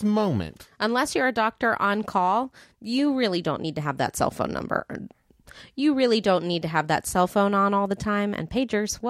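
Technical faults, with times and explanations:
Nothing technical gets in the way here; the speech just runs along without any trouble to point out.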